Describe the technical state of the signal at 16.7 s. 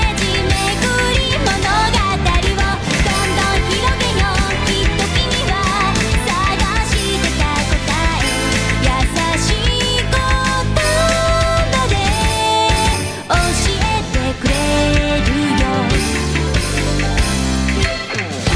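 At 16.7 s the signal is intact, with no dropout, distortion, glitch or other fault audible at that moment.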